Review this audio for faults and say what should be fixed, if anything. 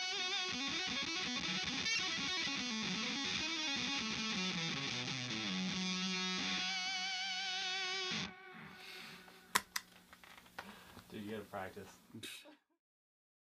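Nothing here needs fixing, since no faults turned up anywhere in the recording.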